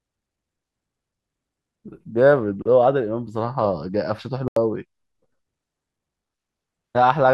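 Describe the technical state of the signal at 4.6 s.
A clean, abrupt hole of silence runs from 4.48 to 4.57 s, about 86 ms: a corrupt frame muted, where the decoder rejected one damaged compressed frame and silence replaced it.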